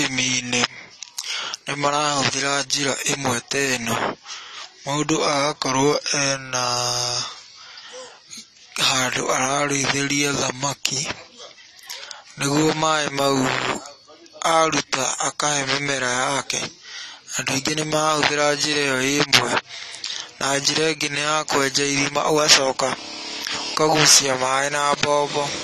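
From start to finish the speech carries AAC compression damage, plainly audible. The sound is dull and smeared. Nothing is heard above about 14 kHz. Sibilants have a fizzy, warbling texture, and sustained sounds waver. The likely cause is AAC-LC coding at a low bitrate, around 32 kbps. At that rate the encoder lowers its cut-off and quantises frequency bands coarsely. That leaves gaps in the spectrum that the ear hears as warbling.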